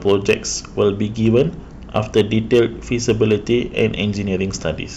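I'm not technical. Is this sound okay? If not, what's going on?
No. The speech has hard clipping. The loudest moments were too big for the recording to hold, so their peaks got chopped flat. That adds a harsh, crackly fuzz. You'll hear it at 0.07–0.33, 0.82–0.89, 1.27–1.41, 1.96–2.61 and 3.09–4.0 seconds. It is worst in the first and fourth stretches.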